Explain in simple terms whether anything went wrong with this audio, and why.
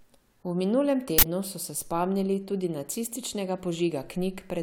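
Uninitialised buffer at 1.18 to 1.23 s: a short, loud burst of digital noise, because leftover memory, probably a 2048-sample block, played before the speech was written in.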